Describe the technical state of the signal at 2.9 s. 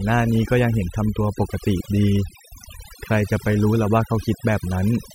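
At 2.9 s the background drops away and breaks up into twinkling specks. This is overdone noise removal, present throughout the clip: an overly aggressive noise reducer cuts bands near its noise estimate, taking quiet parts of the voice with them.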